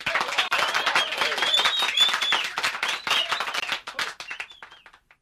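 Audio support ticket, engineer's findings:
Gap at a join of encoded pieces: separately encoded segments spliced without trimming encoder delay or last-frame padding. Sound drops out at 0.48–0.51 s (34 ms) and 3.60–3.62 s (25 ms), edges smeared, then resumes where it stopped.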